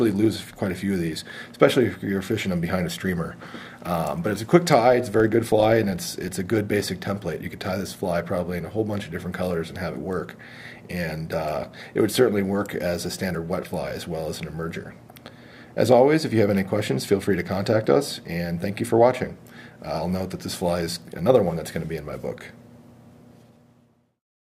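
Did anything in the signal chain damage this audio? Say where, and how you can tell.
Yes. From 4.88 to 6.41 s there is a 25 Hz buzz that rises and falls with the signal level, the mark of a filter restarted on every block in the processing stage. Each 40 ms block starts from zeroed state, leaving a small transient at every boundary.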